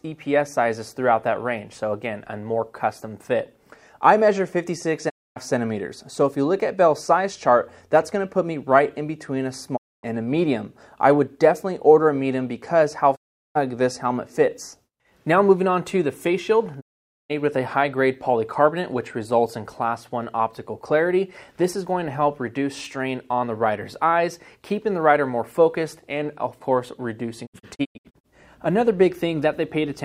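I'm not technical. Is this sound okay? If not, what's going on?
No. This is digital broadcast dropout. The receiver lost the signal and briefly went silent. Gaps start at 5.08, 9.76, 13.15 and 16.80 seconds, each about half a second or shorter. Several short holes follow between 27.45 and 28.26 seconds. Whatever played during the gaps is gone.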